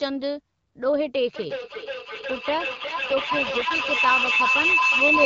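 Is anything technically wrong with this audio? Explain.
Yes, there are two faults.

Feedback howl, 1.36 s to the end: a loop between two devices in one room gains level on each pass, building a tone near 3 kHz up to about 3 dB above the speech. It pulses roughly every 400 ms, and that steady rhythm sets it apart from a single resonance.

AMR rate drop, 2.73 to 3.91 s: the wideband codec's speech turns rougher and more synthetic, with no gap and no loss of bandwidth, which fits a step down from 12.65 to 6.6 kbit/s. That distinguishes it from packet loss or a band cut.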